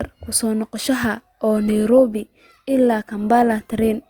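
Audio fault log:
1.57–4.10 s, adaptive stream at a lower bitrate: From 1.57 s to the end, the speech abruptly loses fidelity with no gap, as the stream switches to a cheaper encoding after the connection slows. The drop in quality fits a move from about 64 kbit/s to about 24 kbit/s Opus. Content still reaches about 20.2 kHz, but the encoder has fewer bits to spend on it, so coding artefacts become audible.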